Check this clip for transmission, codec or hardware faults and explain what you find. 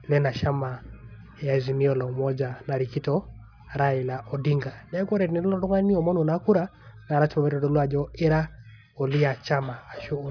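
One fault runs through the whole clip: aliasing. The speech was resampled downward without an anti-alias filter, which fits a drop to about 11 kHz, so energy above the 5.5 kHz fold point mirrors back as unrelated tones, roughly 30 dB below the voice. Sibilants turn gritty and metallic. Simple band-limiting would only dull them.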